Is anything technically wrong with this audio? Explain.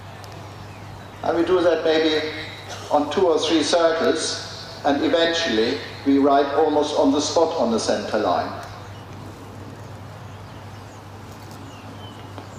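No, the signal shows no technical faults.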